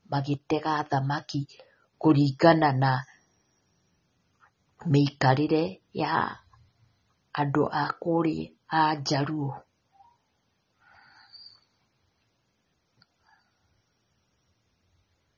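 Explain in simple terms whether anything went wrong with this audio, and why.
The speech sounds dull and a bit swirly all the way through, with nothing above about 7 kHz, likely from heavy AAC compression squeezing the file too small.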